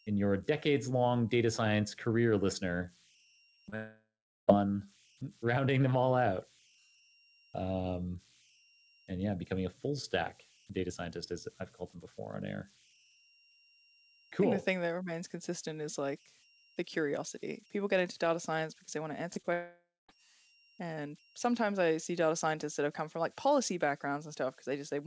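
Speech carried over what sounds like a wideband call codec such as G.722 at 64 kbps, with nothing above 8 kHz, has four faults. Throughout, converter idle tones sit about 32 dB below the signal. Undithered delta-sigma conversion settles into repeating bit patterns on low-level input, producing a faint whistle around 3 kHz in pauses and grain under quiet passages. Right after "data science career listener", from 3.44 to 3.74 s, repeated packet loss gives a choppy, robotic texture: four gaps, the longest 39 ms, about 120 ms in total, each patched by extending the previous waveform before the next gap arrives. From 3.76 to 4.49 s, a long network dropout, likely from audio failing to arrive at all, erases about 0.72 s: the last sound is stretched into a decaying buzz, then roughly 0.37 s of silence before speech resumes mid-stream. After "because they want to", short concealed packet loss leaves brief smears at 19.33 to 19.38 s and 19.42 to 19.45 s, each filling about 20 ms by continuing the preceding pitch or noise and cross-fading back. 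Another long network dropout from 19.53 to 20.10 s removes about 0.56 s, ending in roughly 0.18 s of silence.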